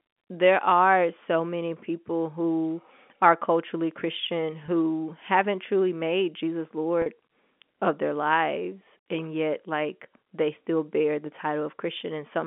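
At 4.66 to 4.68 s, just before "haven't truly made", the speech briefly holds a buzzy, slightly frozen tone, and at 7.02 to 7.06 s a longer held stretch begins to fade before the speech returns with a soft cross-fade. This is packet loss with pitch repetition. About 20 ms and then 40 ms of audio went missing, consistent with one and then two lost packets, and the receiver filled each gap by looping the last pitch period over the narrowband G.711 telephone signal.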